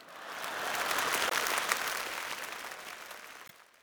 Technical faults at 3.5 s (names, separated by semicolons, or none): block size mismatch (padded); damaged data in a compressed stream